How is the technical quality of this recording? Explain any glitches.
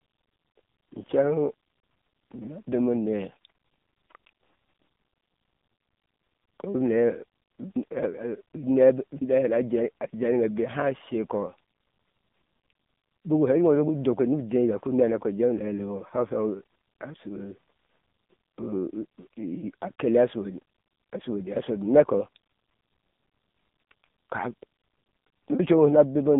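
The technical quality is poor. One fault runs through the whole clip. The AMR narrowband mobile codec is present from start to finish. Nothing passes above about 3.8 kHz, and the band sits near 150 Hz to 3.7 kHz. The codec rebuilds speech from a vocal-tract model and sparse pulses. Here the damage is heavy, with a buzzy, synthetic edge that fits a low rate near 6.7 kbps.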